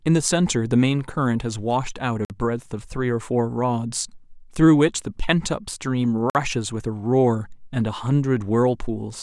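At 2.25 s and again at 6.30 s the speech drops out for 50 ms with hard edges, a gap between chunks: 4 s pieces joined with silence wedged in.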